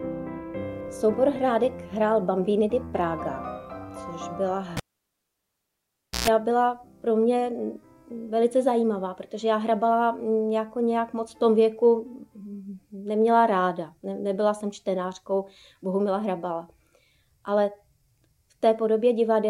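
At 4.77 s a live cable is pulled and plugged in again, breaking the signal path mid-stream. The disconnection lands as a sharp pop, and the audio drops to near silence for about 1.46 s. As the plug goes back in, only the tip makes contact at first, so a 0.12 s burst of 60 Hz mains buzz leaks through before a second pop marks the full reconnection, with sound returning by 6.28 s.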